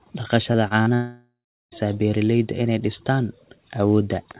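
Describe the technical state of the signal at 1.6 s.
At 1.6 s the signal sits inside a gap running from 0.94 to 1.74 s, likely a long network dropout. The last sound is stretched into a fading buzz, then goes silent. Speech resumes at "beeralayda inay dhistaan", with roughly 0.78 s lost.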